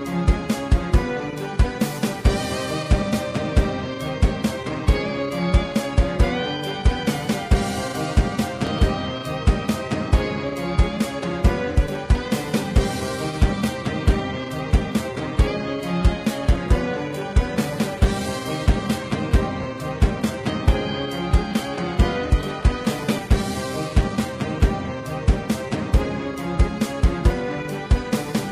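At 12.99 s the audio switches abruptly, with no gap, to an adaptive stream at a lower bitrate until 24.99 s. Content above 14.9 kHz is gone and the treble drops, pointing to HE-AAC near 20 kbit/s. The clean switch back, without a dropout, distinguishes it from a network stall.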